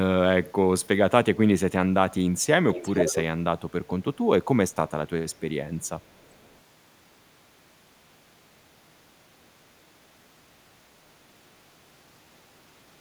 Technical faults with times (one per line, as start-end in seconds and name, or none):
2.35-2.46 echo leak
2.72-3.23 echo leak
5.31-5.37 echo leak
5.81-6.58 echo leak